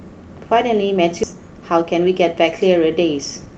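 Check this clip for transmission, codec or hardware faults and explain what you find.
Two kinds of fault are present in this speech clip, both arising in a call path whose codec limits the audio to about 8 kHz, consistent with Opus around 24 kbps.

At 1.23 to 1.25 s there is a skip ahead. About 0.4 s of audio never reaches playback, either lost in transit or discarded by an overflowing jitter buffer. The two sides of the jump are joined with no gap or fill, so the speech lurches forward abruptly.

Jitter buffer speed-up follows from 1.33 to 2.34 s at 110% speed, and again from 3.20 to 3.54 s at 109%. The buffer was holding too much audio and trimmed it by removing short pitch-period segments repeatedly, roughly a tenth of a second in the first stretch and a few hundredths in the second. The speech sounds hurried while its pitch stays unchanged.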